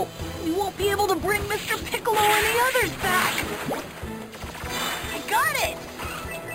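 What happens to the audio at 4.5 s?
At 4.5 s, as throughout, imaging from sample-and-hold upsampling adds a metallic fizz. Audio at 11 kHz was repeated up to 48 kHz unfiltered, so a spectrogram shows mirrored bands from 5.5 kHz to 11 kHz, about 12 dB down.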